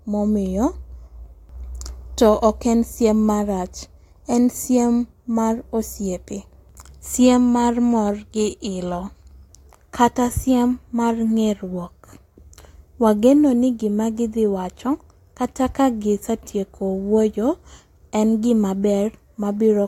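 No technical faults are audible.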